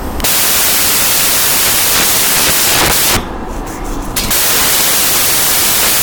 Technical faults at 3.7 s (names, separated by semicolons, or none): samples built from the wrong bytes